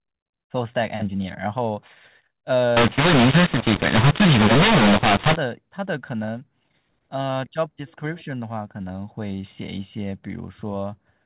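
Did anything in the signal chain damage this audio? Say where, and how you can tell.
Yes, at the codec's decode step. From 2.77 to 5.36 s the speech turns harsh and gritty, with pauses filling with noise, before returning to normal telephone-band sound. That's mu-law and A-law mixed up: mu-law bytes read as A-law, scrambling levels and lifting near-silent samples.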